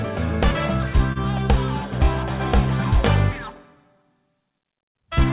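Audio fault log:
Throughout: clock drift between sender and receiver. Timing never quite settles; small hiccups recur at uneven intervals across the whole clip, giving the flow a faintly halting feel. The sending clock runs about one and a half percent slower than the receiving one, so the jitter buffer keeps draining. The receiver has to stretch or repeat small slices to cover the shortfall.
1.13 to 1.18 s: short stall from a late packet. A sound hangs on for a fraction too long, about 30 ms, before the audio carries on from exactly where it stopped. Nothing is lost; a packet arrived late, the buffer emptied, and the receiver filled the gap by extending what it had just played, then resumed once the data came in, adding about 30 ms of delay.
2.97 to 4.53 s: repeated timing corrections. Across this stretch the audio runs at about 98 percent of normal speed, with tiny pieces doubled. The receiver is padding out the stream to keep pace with the slower sender, adding roughly 40 ms in total through a series of small, unevenly spaced repeats, all lengthening the audio rather than shortening it. 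The G.711 mu-law call path leaves nothing above 4 kHz, giving the familiar narrowband telephone sound.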